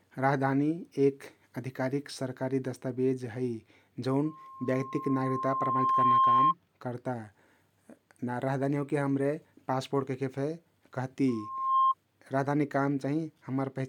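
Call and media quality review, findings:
Mic-to-loudspeaker loop gain above unity at 1.1 kHz, loudspeaker feedback squeal: tone swells over speech, 4.25–6.54 s (about 2 s build, roughly 10 dB over) and 11.28–11.94 s (quicker, weaker).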